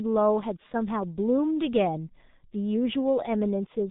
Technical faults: G.723.1 codec

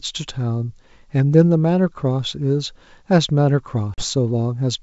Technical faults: packet loss on an ADPCM call

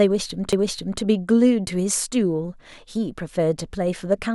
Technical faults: CD skip

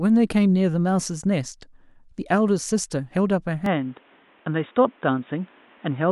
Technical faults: input switched to a poorer device

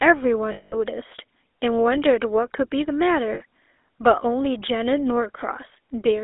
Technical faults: GSM full-rate codec; lost GSM frames

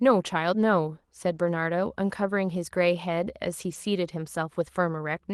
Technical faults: lost packet rebuilt from error correction

